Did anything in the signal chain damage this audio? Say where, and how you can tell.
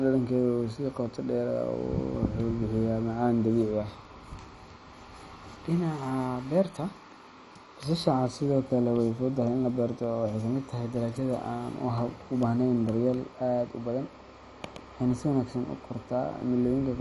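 Yes, at the codec stage throughout: the speech is dull, with nothing above 11.3 kHz, and carries a plainly audible gurgling, granular roughness. This is likely MP2 compression starved of bits, fitting a low rate around 48 kbps, with upper sub-bands flickering off and the rest coarsely quantised. A simple low-pass filter would dull the sound without that grainy texture.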